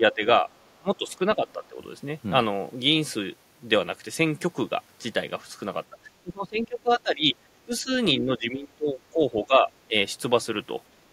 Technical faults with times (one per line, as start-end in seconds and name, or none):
0.00-0.48 speech suppressed in double talk
0.79-1.78 speech suppressed in double talk
5.90-7.92 speech suppressed in double talk
8.17-9.94 speech suppressed in double talk
10.89-11.04 background gated by the echo canceller